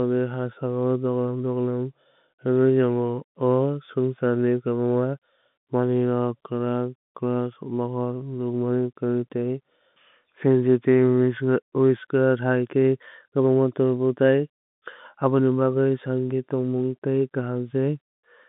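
No faults can be heard anywhere in this clip.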